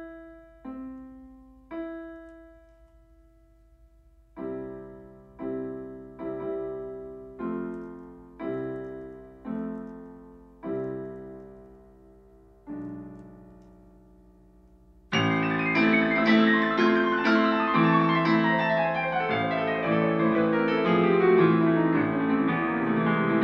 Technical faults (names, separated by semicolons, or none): none